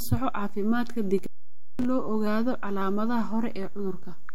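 From the very start the whole speech waveform sits off zero, a DC offset running through all of it. You won't hear it as such, but that constant shift eats headroom and parks steady energy right at the bottom of the spectrum, below anything audible.

Then at 1.18 s, just after "soco caafimaadka", there's intermittent contact, like a loose plug or cable opening up. The signal drops out with a crackle at each edge, stays open for about 530 ms leaving only faint hiss, and comes back by 1.85 s, right before "loo ogaado".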